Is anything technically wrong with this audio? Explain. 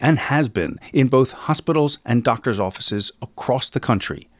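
No, nothing technically wrong can be heard in this speech recording.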